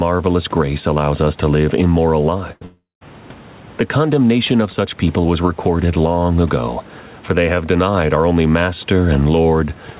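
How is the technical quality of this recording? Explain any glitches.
The recording has three faults: level pumping that runs through the whole clip, and two back-to-back losses around 2.5 to 3.0 s. The sound is speech over a narrowband path, with nothing above 4 kHz, which fits G.711 telephone coding. A faint room noise sits about 31 dB below the speech.

Gain pumping, throughout: The likely cause is input gain set far too high, with a fast limiter or compressor clamping it on every loud syllable. The level swings by around 10 dB, so loud and quiet moments end up squeezed together and the speech sounds flattened and breathing.

Burst of packet loss, 2.52 to 2.64 s, right after "us to live immoral": A short run of packets failed to arrive in time. The receiver stretched the last sound for about 90 ms, turning it down as it went, so it comes out as a brief held buzz or fading hiss. About 80 ms of real audio is gone, and the speech resumes slightly further on.

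Long network dropout, 2.65 to 3.04 s: Immediately after that burst, a much longer gap opens, likely an interruption in the network delivery. For roughly 360 ms nothing usable arrived. The receiver again carried the last sound forward and faded it, and the final 170 ms or so is plain silence. The speech then picks up again with that whole stretch missing.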